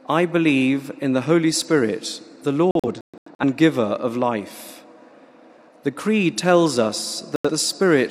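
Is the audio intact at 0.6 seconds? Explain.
Yes, at 0.6 seconds the audio runs cleanly, with no dropout, click, distortion or other fault to be heard at that point.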